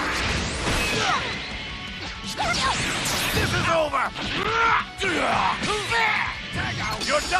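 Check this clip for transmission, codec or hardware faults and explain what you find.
Two short blocks of digital silence interrupt the audio, at 4.43 s and 6.18 s. At the first, the signal falls silent for about 11.6 ms, a span that fits a 512-sample buffer. At the second, the gap lasts about 4.1 ms. The playback path likely failed to deliver samples in time, leaving zeros in the output. The signal drops and returns abruptly, so each gap sounds like a tick or dip. A packet-loss gap would instead be masked by concealment or faded edges.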